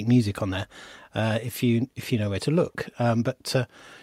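No dropouts, clicks, distortion or other technical faults can be heard anywhere in the recording.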